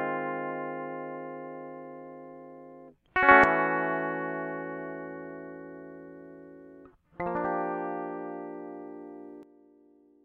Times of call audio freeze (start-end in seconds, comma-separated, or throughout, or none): none